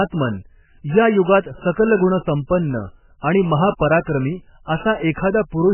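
Speech that's been through heavy MP3 compression for the whole clip, by the sound of it. Nothing comes through above about 3 kHz, so the top end is just gone and the s sounds lose their bite. The rest has that watery, swirly quality you get when weak frequency lines keep dropping in and out between frames. Damage this bad points to a very low bitrate, something like 8 kbps, which is likely the cause.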